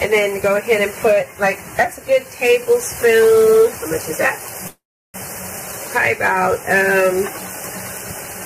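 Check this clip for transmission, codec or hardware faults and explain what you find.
One fault is audible. A call audio freeze runs from 4.67 to 5.16 s. Packets were likely delayed in transit, emptying the jitter buffer. The last sound stretches into a fading buzz or hiss, then 340 ms of silence. Playback resumes where it stopped, with nothing lost but everything after it 466 ms late.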